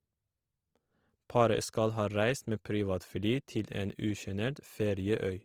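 The speech was likely squeezed through Opus compression in its CELT music mode at a rate that fits about 24 kbps. Short of bits, it fills bands with folded or noise content, so from start to finish tones turn grainy, rough and noisy.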